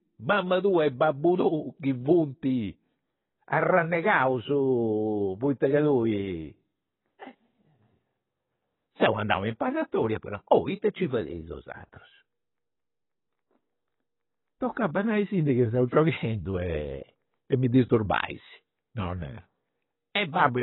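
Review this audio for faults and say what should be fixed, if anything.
Throughout the speech, nothing is present above 4 kHz and the damage is heavy: the sound is dull and smeared, which is likely AAC compression. The AAC-LC encoder, working at a rate that fits about 16 kbps, lowered its cut-off and spent its few bits on the bands its hearing model ranked highest. A simple low-pass filter would sound clean below the cut-off; here the smearing and loss of detail run through the band that remains. To prevent it, encode from the original source at a much higher bitrate.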